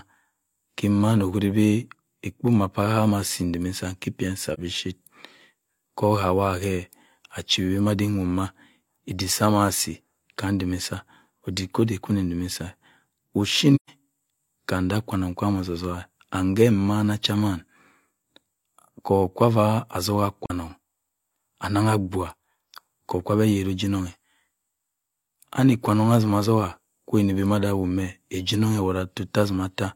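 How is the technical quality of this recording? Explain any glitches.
The speech has three brief dropouts from AAC frame loss with muting. At 4.54 s and 20.45 s, about 43 ms vanishes, which fits one lost frame. At 13.75 s a longer gap of 128 ms suggests three frames. The decoder zeroed each missing spectrum, so overlapping windows fade the sound out and back, leaving a brief dip for each single lost frame and a soft-edged hole for the three-frame run.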